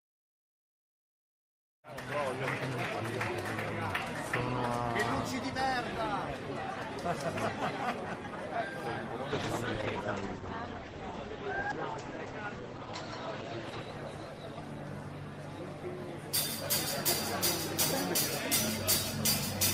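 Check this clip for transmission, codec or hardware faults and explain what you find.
One fault is audible: a call bitrate drop. From 9.34 s to 14.95 s the encoder codes more coarsely, fitting a fall from 32 to 12 kbps. Bandwidth narrows from 20 kHz to 8 kHz. The sound turns rough and muffled, then clears.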